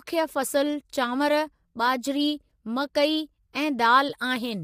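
Low-delay AAC compression runs throughout the speech, the likely cause of the plainly audible rough, grainy texture. Its short frames resolve pitch harmonics poorly, leaving noise between them and a dulled top band, damage that fits a bitrate around 32 kbps.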